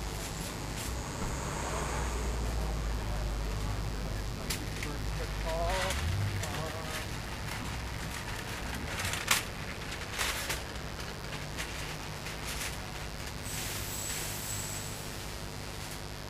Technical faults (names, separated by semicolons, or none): mains buzz